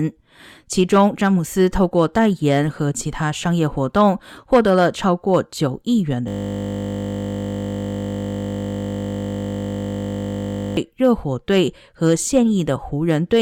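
Speech clip with a classic system hang loop from 6.28 s to 10.77 s. The machine or driver froze, and the sound hardware kept replaying whatever was sitting in its ring buffer. Here that's a 20 ms slice repeating over two hundred times, so instead of a stutter you get a steady buzz at 50 Hz for about four and a half seconds. The loop length fits a small 20 ms output buffer.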